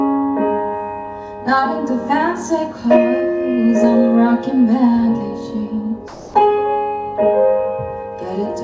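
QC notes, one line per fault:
6.08–6.34 s, comfort noise in place of the background: for 260 ms the real background, sitting about 19 dB below the loudest passages, gives way to a flat, featureless hiss about 3 dB quieter, losing its texture before the sound resumes. This is likely discontinuous transmission on the call path: the sender paused sending during the quiet stretch, and the receiver filled the gap with synthetic noise shaped roughly like the background. The band stops at 8 kHz, which fits a G.722 call codec.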